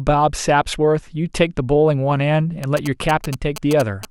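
Speech, with GSM signalling bursts from about 2.64 s to 4.05 s: a galloping dit-dit-dit of short buzzes at a 217 Hz repetition rate, sitting only about 10 dB below the speech. A nearby 2G phone is exchanging brief signalling bursts with its network, and the audio circuitry rectifies the radio energy into audible clicks. Unlike steady mains hum, or the continuous buzz from a phone mid-call, this comes in stuttering clusters that start and stop.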